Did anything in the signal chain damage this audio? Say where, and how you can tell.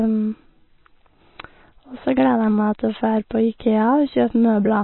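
Yes, codec stage: the speech is cut flat above 4.1 kHz throughout and sounds watery, likely MP3 compression; a spectrogram shows a hard ceiling and flickering gaps.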